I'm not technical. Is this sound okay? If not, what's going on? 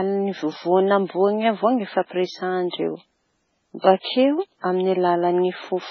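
No. The speech sounds muffled the whole way through, with nothing above 7.4 kHz. It's likely low-bitrate audio saved at a high bitrate, and the lost detail stays lost.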